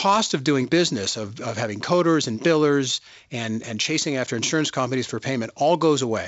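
Nothing goes wrong anywhere in this recording; it's simply speech carried over G.722 wideband telephone coding at 56 kbit/s, with the sound topping out around 7.7 kHz as that path would have it.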